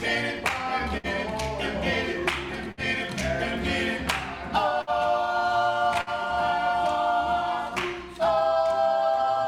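At 0.97, 2.72, 4.81 and 6.01 s there is a burst of packet loss. About 60 ms of audio each time never arrives. The receiver stretches the last sound across the gap and fades it. Each dropout is a short buzz or hiss, then a small jump ahead.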